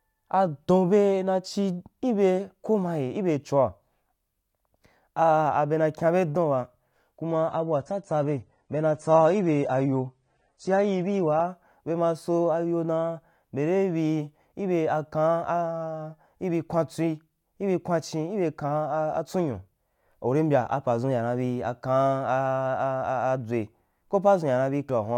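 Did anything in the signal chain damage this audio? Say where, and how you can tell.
Yes. Network stage: adaptive stream at a lower bitrate from 7.48 to 11.48 s. Treble vanishes above 9.7 kHz, codec artefacts rise, with no gap, matching a drop toward 32 kbit/s.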